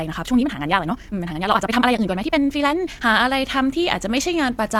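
From the start to 3.06 s, the speech is a time-stretched section, sped up about 1.95 times while its pitch stays put. Software likely squeezed it by dropping short pieces. It sounds rushed. At 3.06 s the pace changes abruptly.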